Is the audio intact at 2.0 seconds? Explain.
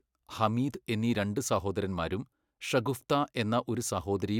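Yes, at 2.0 seconds the speech plays through with no dropout, click, distortion or other fault.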